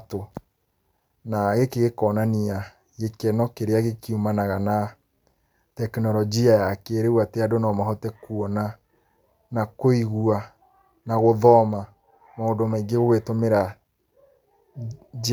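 No technical faults can be heard anywhere in the speech.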